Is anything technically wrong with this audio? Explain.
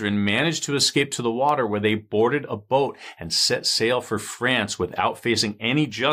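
Yes. Periodic USB or driver dropouts occur at 1.49, 3.49 and about 5.5 s, every 2.0 s. Each time, a tiny fraction of a millisecond of the speech is replaced by silence as the audio path stalls briefly, heard as a regular tick.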